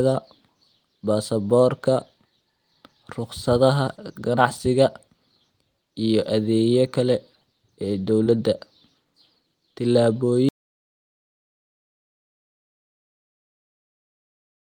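At 3.95 to 3.99 s and again at 8.24 to 8.28 s, there is short concealed packet loss. About 20 ms of audio arrived too late each time. The decoder extended the previous sound, leaving a brief smear. From 10.49 s to the end, there is an audio dropout to silence. The sound cuts off into silence, with no room tone. The input was likely lost or muted.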